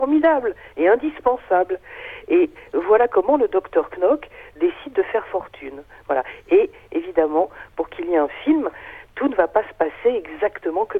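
Listening through the recording, nothing stood out as a technical problem at any point.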